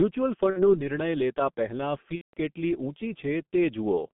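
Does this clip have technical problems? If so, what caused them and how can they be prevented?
Yes, two problems. The whole clip runs through a G.723.1 codec, probably at around 6 kbit/s. The speech is squeezed into roughly 150 Hz to 3.5 kHz, so it sounds muffled and hoarse with smeared consonants. A wideband codec at a higher bitrate would avoid this.

There's also VoIP packet loss concealed by the speech codec, from 0.50 to 0.75 s and from 2.15 to 2.34 s. The decoder fills each gap by stretching its last sound into a fading buzzy tone or coloured noise, and the speech stays rough for a moment after the stream returns. The dropouts sound like about 60 ms and about 180 ms of missing audio. A cleaner network path, a jitter buffer or forward error correction would keep those packets from going missing.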